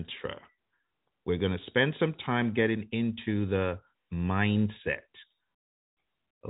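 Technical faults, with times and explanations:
No technical faults can be heard in the speech. It carries the narrow band of G.711 telephone coding, with nothing above 3.8 kHz, as that format is meant to sound.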